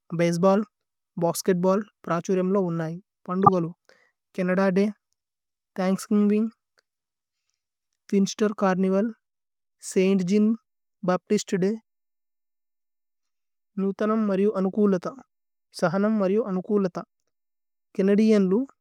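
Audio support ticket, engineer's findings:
Corrupt frame decoded, 3.45 to 3.49 s, right after "ഉന്നൈ പന്ദു". Loud chirp-like burst. Decoder played a damaged compressed frame. Flipped bits gave wrong gains and codes, so energy landed at the wrong frequencies. The 34 ms length points to a handful of frames hit. Second corrupt frame decoded at 6.53 s. Very faint blip, well down in level, fits only a couple of damaged frames. Suspect the transport or storage path feeding the decoder.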